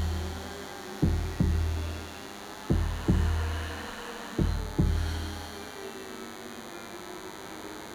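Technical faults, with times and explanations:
Throughout, DECT cordless phone buzz: there's a thin, steady buzz sitting under the sound the whole way, pitched at 100 Hz but edgy rather than a clean hum, because it's packed with harmonics. That's the signature of a DECT handset or base station close by, firing a short radio burst every 10 ms that the audio circuitry rectifies into a pulse train. It's fairly prominent too, sitting only around 15 dB below the signal.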